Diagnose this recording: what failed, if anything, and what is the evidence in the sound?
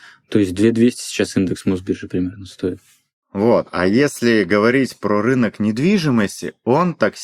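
Nothing in the recording points to a failure at any stage of the chain. The speech runs without any audible break or disturbance that would implicate wiring, conversion, processing, transmission, storage or playback.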